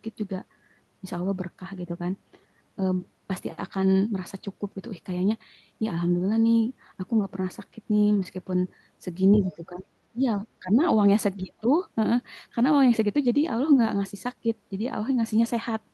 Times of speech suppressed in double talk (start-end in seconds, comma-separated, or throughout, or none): 9.39-9.86, 10.12-10.82, 11.37-11.67